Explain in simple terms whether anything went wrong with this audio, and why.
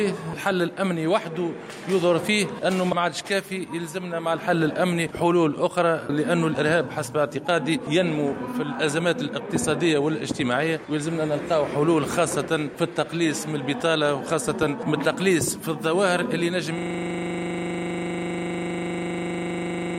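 At 16.79 s the system froze, a system hang loop, and the last 40 ms kept replaying about 80 times, a rough 25-per-second buzz to the end.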